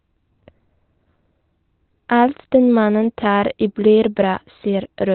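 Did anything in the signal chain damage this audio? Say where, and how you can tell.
Yes, at the codec: speech is muffled and hoarse throughout, spectrogram cut flat at 4.2 kHz, likely Opus compression in narrowband SILK mode at a low bitrate.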